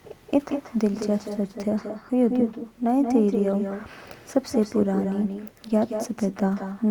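The far end of this call has no echo canceller, so speech played from its loudspeaker is picked up again by its microphone and sent back across the network. The result is echo with no canceller running through the whole speech clip: every phrase is followed, roughly a fifth of a second later, by a copy about 7 dB quieter. That copy sounds thinner, and it smears each syllable into a doubled tail.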